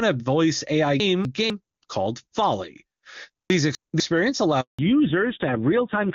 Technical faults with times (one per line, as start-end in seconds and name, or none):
1.00-1.50 chunks out of order
3.50-4.00 chunks out of order
4.61-4.79 handover gap
4.79-6.15 fallback to narrowband